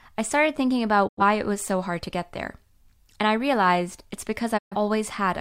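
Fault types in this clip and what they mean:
Digital broadcast dropout: The receiver stopped getting good frames and muted its output until clean ones returned. The speech fades out over about 20 ms and then falls silent. After "I started thinking" a hole runs from 1.07 to 1.22 s, and speech resumes with "it was so hard". After "I realized it's" a second hole runs from 4.57 to 4.76 s. The gaps fit about two and three lost frames. That audio is gone, not delayed.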